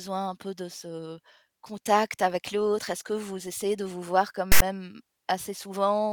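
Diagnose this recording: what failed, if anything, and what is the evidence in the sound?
File tags played as audio, from 4.52 to 4.62 s in this speech clip: a storage or file-parsing failure, where a metadata block was decoded as samples. The text bytes produce a harsh, one-sided rasp, then the zero padding drops to silence, with abrupt edges on both ends.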